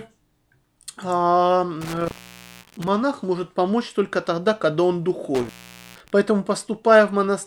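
At 1.81 s the speech drops out through an intermittent contact. A loose cable or plug briefly breaks the signal path. The disturbance runs to 2.88 s, and the line stays open for about 0.53 s of that. Crackle marks the edges as the contact scrapes open and shut, and faint hiss fills the gap. It happens again from 5.35 to 6.10 s, just after "только тогда когда он". This time the line is open for about 0.47 s.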